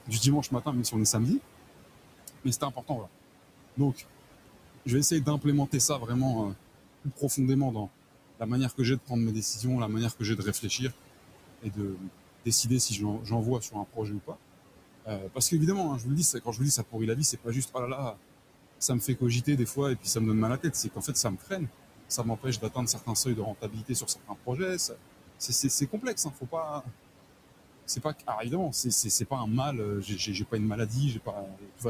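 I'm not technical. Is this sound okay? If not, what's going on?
No. Throughout the recording there are noise suppressor artifacts. A filter is pushing the room's background noise down, but it pumps with the speech: quiet in the pauses, back up under talking. A hiss that stayed steady would point to the room itself.

There is also speech cut by the noise suppressor. From 0.06 to 1.15 s, from 2.27 to 26.89 s and from 27.96 to 31.85 s, the same filter mistakes soft word endings and quiet sounds for noise and turns them down. Altogether about four seconds of talking in the long middle stretch sound swallowed, and smaller bits near the start and end do too. A bad microphone would dull everything evenly. This comes and goes in brief pieces.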